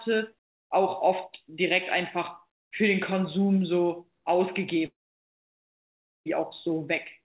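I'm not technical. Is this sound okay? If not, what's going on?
No. At 4.86 s the speech turns into a brief fading buzz, then goes silent until 6.27 s. About 1.4 seconds of speech is simply gone. This is likely a long network dropout, where the connection stopped delivering sound for a while.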